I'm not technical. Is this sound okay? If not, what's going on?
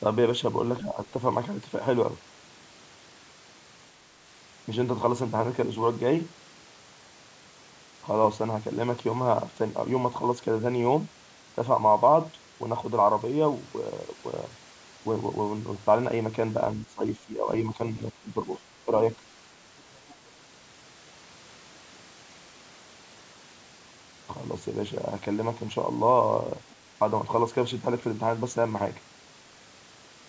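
No. The voice briefly dips at 0.82 to 0.99 seconds, then sinks much deeper from 16.76 to 18.6 seconds, with short dips again at 18.84 to 18.92 and 19.16 to 19.22. This is likely speech suppressed in double talk. Both people spoke at once, and the call's echo control turned this voice down too.

A second, faint voice comes through at 19.78 to 20.14 seconds and as a tiny scrap at 26.69 to 26.75 seconds. It is very quiet. This is likely the other side's voice leaking through. Their voice played from the loudspeaker, and the microphone picked up some of it.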